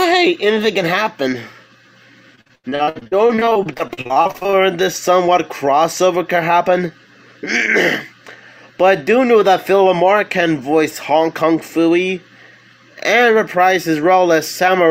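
From 2.35 to 4.54 s the sound turns choppy and robotic: repeated packet loss, with dropouts arriving in quick succession, the longest about 84 ms. Each hole is bridged by stretching the last received sound, so roughly 41% of that stretch is concealment, giving a stuttering texture.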